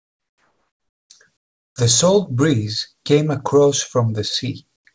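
Comfort noise in place of the background appears at 0.00–1.10 s, 1.37–1.76 s and 4.76–4.85 s: in each pause the real background is replaced by a flat, featureless hiss, about 6 dB, 20 dB and 18 dB quieter respectively. The likely cause is discontinuous transmission, with the sender going silent between speech and the receiver synthesising shaped noise instead. Like the rest of the call audio, which shows the G.722 codec's cutoff at 8 kHz, the fill has no content above that.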